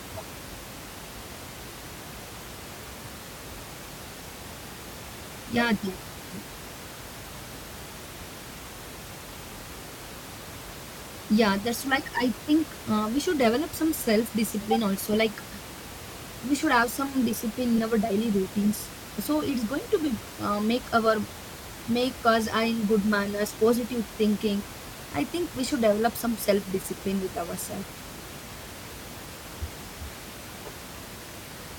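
No technical faults occur anywhere in the recording.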